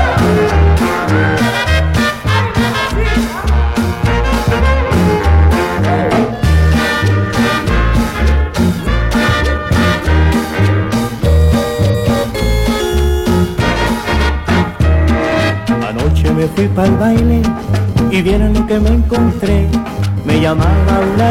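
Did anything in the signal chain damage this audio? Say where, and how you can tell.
Yes, at the codec stage: damaged data in the compressed stream. Brief glitches of about 50 to 60 ms break the sound at 1.63, 3.81, 8.83, 11.89 and 17.88 s, where corrupted bytes make the decoder misread frames and lose sync until the next valid header.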